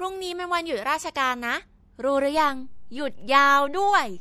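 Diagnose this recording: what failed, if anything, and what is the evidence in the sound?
Watery, swirly speech with smeared attacks and nothing above 17.9 kHz throughout, likely from MP3 encoding at the codec stage, consistent with a bitrate around 64 kbps.

A low thump at 2.37 s as the waveform's zero line jumps and holds to the end: a DC step, from a converter recalibrating or an offset input being switched in.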